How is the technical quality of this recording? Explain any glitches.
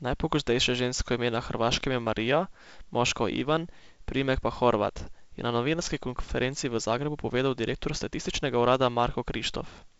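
Nothing stood out on listening to this speech recording, which carries the band-limited sound of G.722 wideband telephone coding at 56 kbit/s, with nothing above about 7.7 kHz.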